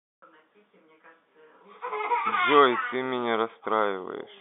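No technical faults can be heard in the speech. It comes through the G.711 telephone coding path as a standard phone line would, with the band running from about 200 Hz to 3.6 kHz, nothing above roughly 3.8 kHz, and at most a faint trace of the coding itself.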